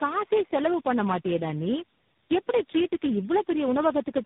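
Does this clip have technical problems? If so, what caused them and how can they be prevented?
Yes: tandem speech coding throughout. The speech passed through four low-rate speech coders in a row (likely AMR-NB and G.726 links joined by G.711), each re-coding the last one's damage. The result is rough, warbly and muffled, with a hard spectrogram ceiling near 3.8 kHz and smeared harmonics. To prevent it, keep the call in one codec end to end, using transcoder-free operation.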